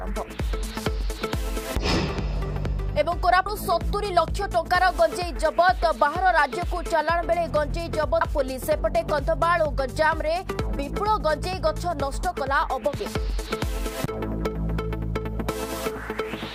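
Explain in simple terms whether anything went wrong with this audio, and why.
At 3.46 s and 8.21 s the sound jumps ahead abruptly, skipping about a third of a second each time. This is audio missing between chunks, likely from a recorder handling audio in 5-second pieces and losing a little at each handover.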